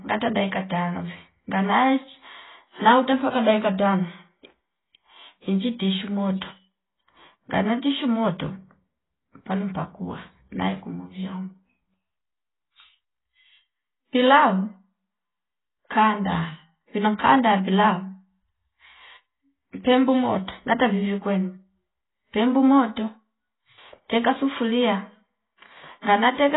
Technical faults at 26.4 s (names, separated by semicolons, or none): AAC compression; loudspeaker feedback squeal